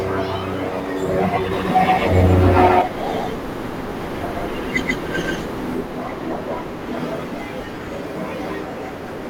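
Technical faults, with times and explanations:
1.53–5.75 s, doubled audio track: a second, equally loud speech copy trails about 150 ms behind, likely from a slower capture path, starting and stopping abruptly without echo decay.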